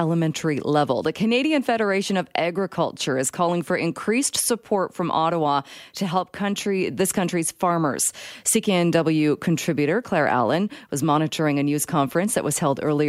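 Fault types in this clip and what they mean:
No audible faults turn up anywhere in this speech recording.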